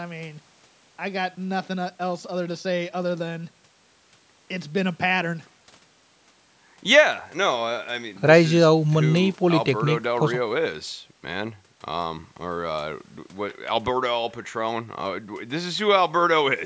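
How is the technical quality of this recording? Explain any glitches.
The recording has one glitch, near the end of the speech.

From 14.89 s to 16.39 s there is channel delay (comb filtering). One channel runs a tiny fraction of a millisecond behind the other, on the order of a couple of samples, and when the two are summed to mono the shared content cancels at evenly spaced frequencies. With a delay that short, the first notch sits at roughly 10 kHz. That is above the 8 kHz ceiling of the call microphone processing, so the deep notch itself is out of band. What remains is a progressive loss of upper treble below it, which makes the sound duller for that stretch.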